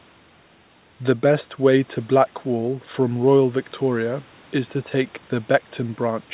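No faults; the speech sits within a 4 kHz narrowband telephone band, as expected from the call codec on this path, with nothing going wrong along the way.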